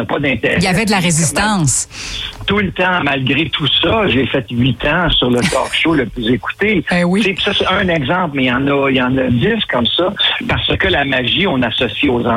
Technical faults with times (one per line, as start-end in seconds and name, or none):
none